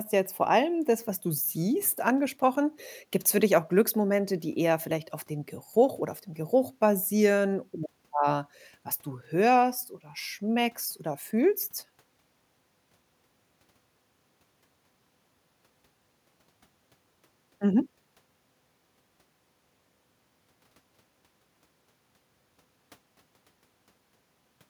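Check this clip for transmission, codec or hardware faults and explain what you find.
No transmission, codec or hardware faults can be heard anywhere in this speech recording, so there is nothing to report.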